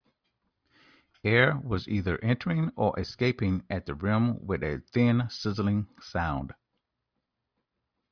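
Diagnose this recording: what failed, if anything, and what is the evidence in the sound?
Nothing in the chain has audibly failed: the speech signal stays continuous, with steady level and timing across the whole recording.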